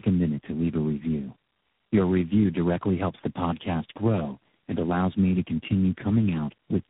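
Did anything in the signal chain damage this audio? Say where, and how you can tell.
Yes: tandem speech coding at the codec stage. About four speech codecs in a row each recoded the last one's damage, so speech is rough, warbly and muffled throughout, with nothing above 3.8 kHz.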